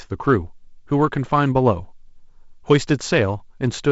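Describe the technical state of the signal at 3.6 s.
At 3.6 s the audio is intact, with no fault present, the speech carried through G.722 wideband telephone coding that leaves nothing above about 7.7 kHz.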